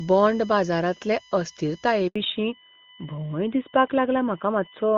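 Running under the whole of this speech recording is USB whine. Current drawn by the USB bus in 1 ms frames has leaked into the audio path through the power or ground wiring. It produces a steady, fixed-pitch whine built on a 1 kHz fundamental, with its strongest component at the twelfth harmonic, 12 kHz. It sits roughly 25 dB below the speech. At 2.08 s the call suffers a handover gap: the phone moved the connection between networks, and no speech frames arrived while the link changed over. The voice drops out for 80 ms, until 2.16 s, and whatever was said in that window is simply gone. When the new link comes up at 2.16 s, the call has undergone a fallback to narrowband. The wideband HD Voice codec, whose clean, full-sounding speech in the first two seconds fits its top rate, has been replaced by an older narrowband codec, most plausibly AMR-NB at 12.2 kbit/s. From that point to the end, nothing above 4 kHz survives. 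Sibilants lose their crispness, and the voice turns duller and rougher.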